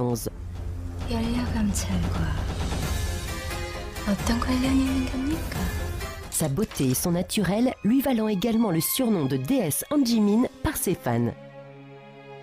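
No technical faults can be heard anywhere in it.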